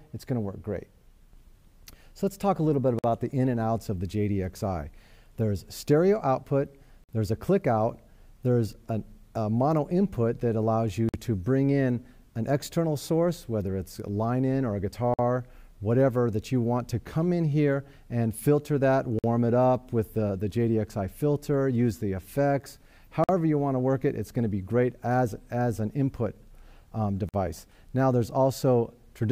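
Short, hard-edged holes of silence, each 50 ms long, break the sound at 2.99–3.04 s, 7.04–7.09 s, 11.09–11.14 s, 15.14–15.19 s, 19.19–19.24 s, 23.24–23.29 s and 27.29–27.34 s. This is a gap between chunks. The audio was delivered in 4-second chunks, and 50 ms of silence was inserted at each join. No material is missing, but the flow stops abruptly at every boundary, at a steady rhythm.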